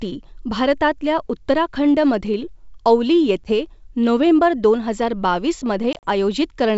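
At 3.44 s and again from 5.93 to 6.06 s, packet loss on an ADPCM call punches silent gaps into the speech: first a single 10 ms hole, then 70 ms of dropouts scattered over 100 ms. Each hole appears as a flat waveform and a blank vertical stripe on a spectrogram. The decoder's predictor, knocked out of step with the sender's, leaves the speech slightly distorted after each gap until it settles.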